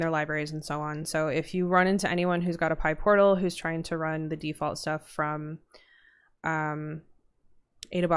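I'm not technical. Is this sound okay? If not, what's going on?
Yes, this one's fine, with nothing going wrong anywhere in it that you'd need to worry about.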